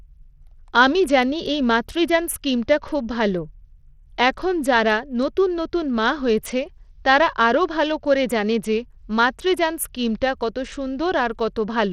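From start to finish the speech carries plainly audible damage of the kind Bluetooth SBC compression leaves, likely from a starved bit pool, consistent with roughly 80 kbps. Upper sub-bands lose their bits, so treble flickers and drops out, while coarse quantisation adds gritty noise and aliasing.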